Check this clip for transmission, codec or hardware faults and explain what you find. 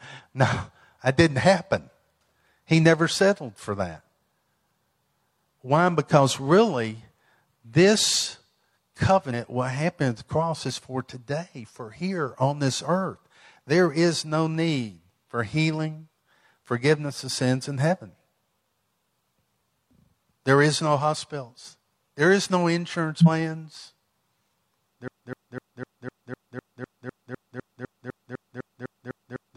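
Two kinds of fault are present: skipped compressed frames twice, and a broken-record loop at the end.

Compressed frames skipped at 9.29–9.34 s, just before "what happened at the", and 23.18–23.28 s, right after "is no". About 100 ms of audio jumps away. A waveform shows an abrupt envelope discontinuity. A spectrogram shows a narrow seam.

Broken-record loop from 25.08 s to the end. A 252 ms fragment repeats 18 times, most likely from a stalled stream resending its last buffer. The waveform and spectrogram show identical blocks tiled at a regular interval.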